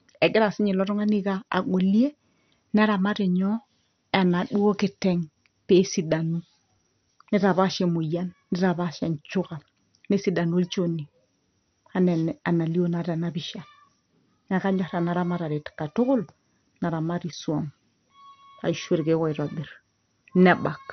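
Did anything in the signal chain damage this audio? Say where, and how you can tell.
Yes, the codec stage. Across the whole speech clip the top end is missing, with nothing above about 6.1 kHz, and the remaining sound has a gurgling, granular grit. That's likely MP2 compression starved of bits, something like 48 kbps. Layer II divides the spectrum into 32 sub-bands and shares out bits; at this rate the upper bands get switched off entirely and the surviving ones are quantised so coarsely they churn and flicker.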